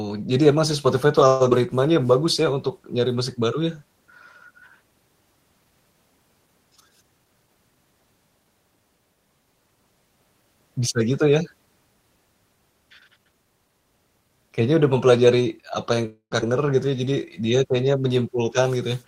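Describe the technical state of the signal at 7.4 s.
At 7.4 s the speech sounds hurried, running about 11% fast while the pitch stays put. This is a jitter buffer speed-up from 6.96 to 8.01 s: the receiver, holding excess buffered audio, repeatedly cut pitch-period-sized slices, dropping roughly 150 ms in total.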